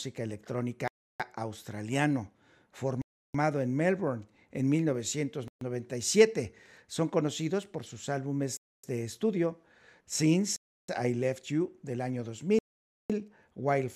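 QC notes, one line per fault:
0.88–13.10 s, Bluetooth stall, six times: 0.88–1.20 s, 3.02–3.35 s, 5.48–5.62 s, 8.57–8.83 s (after "conocidos por sus", before "de estudio"), 10.56–10.88 s, and 12.59–13.10 s (after "del año"). The speech drops to dead silence for 0.13 to 0.51 s, then resumes. The likely cause is radio interference delaying packets, so the headphones' buffer emptied and playback froze until retransmitted audio arrived.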